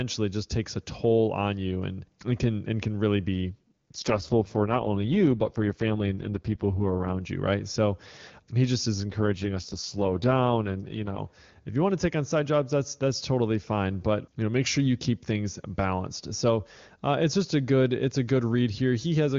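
After "and can really be", from 3.55 to 7.21 s, an AMR rate drop makes the speech rough and synthetic. The band and timing stay intact. This fits a step down from 23.85 to 6.6 kbit/s. Clarity returns at "you right so he". It recurs after "so he just is", from 9.09 to 11.20 s, until "if you want to".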